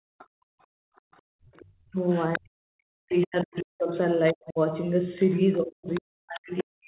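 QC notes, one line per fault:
0.00–1.47 s, background gated by the echo canceller: the room tone sinks by about 37 dB in bursts totalling about a second, then recovers. The canceller clamps the microphone while the loudspeaker plays. On a spectrogram the noise floor goes blank in patches; the waveform flattens to near silence.
0.18–2.39 s, 3.14–3.24 s, 4.28–4.32 s, 5.22–6.01 s, 6.58–6.63 s, other side's voice leaking through: a faint second voice sits about 25 dB under the talker, and about 20 dB under in the 5.22–6.01 s stretch. This is likely loudspeaker echo the canceller left behind. The spectrogram shows weak harmonic traces between the main voice's bands. The short ones appear as brief smudges.
1.88–4.58 s and 5.57 s to the end, speech suppressed in double talk: the talker's voice dips by around 40 dB in places, for about two seconds in the first span, and thins or breaks while the far side is active. 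This is likely the canceller treating overlapping speech as echo. The waveform shows chopped, collapsed envelopes. On the spectrogram, harmonics fade or vanish mid-syllable, all within the call's 4 kHz ceiling.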